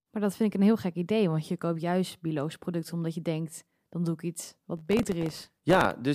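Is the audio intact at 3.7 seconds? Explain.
Yes, at 3.7 seconds the speech plays through intact, with no fault to be heard at that moment.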